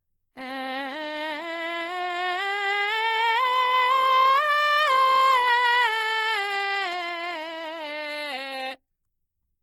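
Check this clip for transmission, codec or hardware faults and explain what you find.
One codec fault runs through the whole music clip, plainly audible from start to finish. Its likely cause is Opus compression. Tones sound rough, grainy and noisy because the encoder's music mode keeps each band's energy and, short of bits, fills bands with folded or noise content, which fits a very low bitrate near 16 kbps. Unlike MP3 there is little swirling, and the bandwidth stays full, reaching about 20.3 kHz, so it isn't the muffled speech mode.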